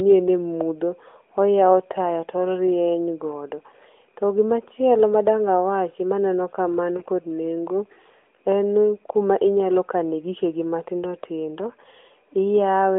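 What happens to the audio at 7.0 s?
Around 6.98 to 7.04 s, one lost AMR speech frame, 20 ms of audio, is patched by the decoder repeating the last good pitch and vocal tract settings at reduced gain. It sounds like a brief dip or warble. On a spectrogram the narrowband harmonics flatten and fade briefly, and the waveform envelope dips.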